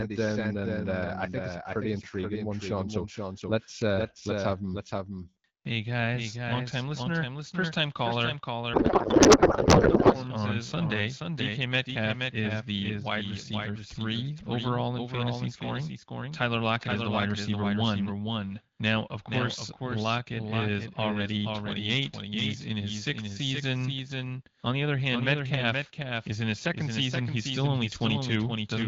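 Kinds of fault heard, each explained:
Doubled audio track: A second full copy of the speech trails about half a second behind, a few dB quieter, likely from a duplicate capture path.
Codec payload misread: After "listener first time caller", from 8.73 to 10.17 s, speech turns to garbled warble, octet-aligned AMR frames misread as bandwidth-efficient.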